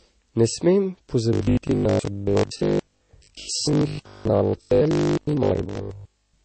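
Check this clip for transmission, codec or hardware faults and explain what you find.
Two faults stand out: a mixed layer of codec damage across the whole recording, and a mechanical buzz from 1.33 s to the end.

Transcoding between lossy codecs runs throughout. Nothing is present above 8.4 kHz, and two kinds of artefact sit together: smeared, swirly high-frequency detail of the sort a low-rate MP3 leaves, with a second codec's watery quantisation laid over it. This is likely an MP3 at around 32 kbit/s re-encoded to Vorbis at around 42 kbit/s. The later encoder spent its bits preserving the first one's errors while adding its own, and the lower band limit carried through. A single poor encode would show one consistent artefact texture. The stacked, differently coloured distortions here point to a chain.

Robotic sound from repeated short buffers runs from 1.33 s to 6.43 s. The speech becomes a rigid, metallic drone locked at 50 Hz, which fits 20 ms chunks being replayed over and over when fresh audio failed to arrive in time. 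Most of the real signal in that stretch is skipped and replaced by these repeats, so the speech shape survives only loosely. This is likely a starved playback or network buffer. Unlike the codec damage, it is a fixed periodic pitch imposed on everything rather than a spectral smear.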